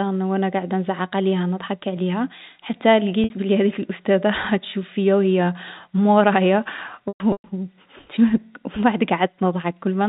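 At 3.24 s, 60 ms of lost packets are bridged by packet loss with pitch repetition, a brief buzzy hold. From 7.08 to 7.44 s scattered losses, the longest 120 ms, fade toward silence. Spectrograms show frozen, flat harmonics. Waveforms show identical repeated cycles decaying in amplitude.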